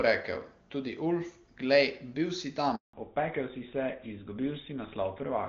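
At 2.75 s, right after "glej bil si", a handover gap silences the audio for 180 ms while the call switches networks and no frames arrive. From 2.93 s to the end, a fallback to narrowband from clean HD Voice to what sounds like GSM full rate removes everything above 4 kHz, leaving the speech duller and rougher.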